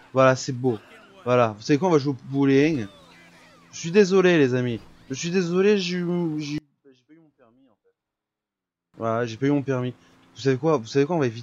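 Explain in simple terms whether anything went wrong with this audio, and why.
Between 6.58 and 8.94 s the sound shrinks to a faint trace, likely one channel inverted cancelling the other. A dropout would go fully silent instead.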